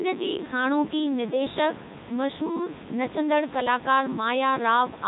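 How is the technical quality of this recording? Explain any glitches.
The quality is poor throughout, because the whole recording has been passed through a very low-bitrate speech vocoder. Codec 2 vocoder artefacts run throughout the clip. The decoder rebuilds the speech from sine waves driven only by pitch, voicing, energy and a spectral envelope, so the original waveform is gone. The result is heavily robotic and buzzy, with nothing above 3.8 kHz, which fits Codec 2's 3.2 kbit/s mode. The room noise, about 16 dB below the speech, also passes through the vocoder.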